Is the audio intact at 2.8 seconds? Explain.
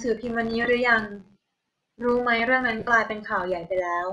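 No. From 2.79 to 2.87 s there are lost LE Audio frames: about 68 ms of missing audio scattered across that stretch, the longest gap around 50 ms. The decoder fills each gap by reusing the last spectrum with random signs, so the sound smears into noise instead of cutting to silence. That noisy fill is what sets it apart from a plain dropout.

The filter restarted on every block is also present at this moment, as it is across the whole clip. Each block starts from silence with a small transient, giving a steady buzz at about 86 Hz that rises and falls with the speech level. That rate fits a 512-sample buffer, and its regularity distinguishes it from the one-off concealment smear.

The speech here also has a breathy, grainy edge from plainly audible codec damage, with the upper spectrum thinned and filled with noise. The likely cause is Bluetooth LC3 compression. Unlike the lost frames, this texture is continuous rather than a brief smear.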